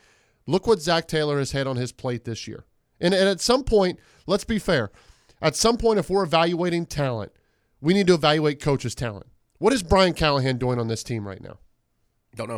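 Nothing stood out as a technical problem on listening to this speech recording.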